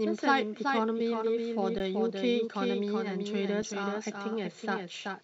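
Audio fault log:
throughout: doubled audio track. A single full-band copy of the speech trails roughly 0.4 s behind at about 5 dB lower, with no decay or room colour, so it is not reverb or a natural echo. The likely cause is a second, slower capture path.
1.79 s and 3.62 s: underrun with held sample. The waveform freezes flat for 15 ms and then 5 ms, and live audio was lost during each hold.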